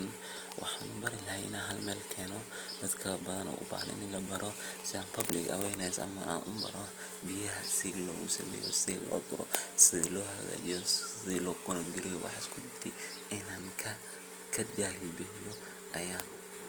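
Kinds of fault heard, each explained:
Opus compression: The speech throughout has a rough, grainy texture that is plainly audible, which is likely from Opus coding in its music (CELT) mode at a rate that fits about 24 kbps. Starved bands are filled with folded or noise-like energy instead of being left empty, so the sound turns coarse rather than swirly. That absence of warbling spectral holes sets it apart from MP3. Bandwidth stays full, extending to 20.2 kHz, so it is not muffled.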